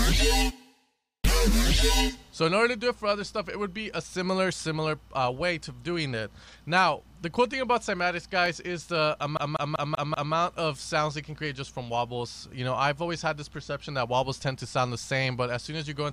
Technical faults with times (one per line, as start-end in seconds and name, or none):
8.46 block of digital silence
9.37-10.34 CD stuck on one turn